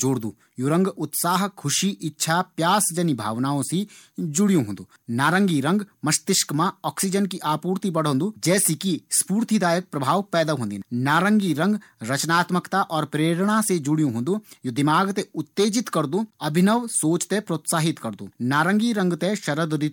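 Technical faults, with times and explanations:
Nothing here needs flagging; the speech comes through steady and intact, with no technical faults to report.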